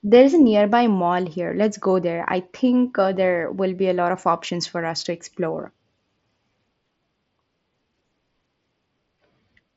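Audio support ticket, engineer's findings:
No fault found; mSBC headset path working as expected.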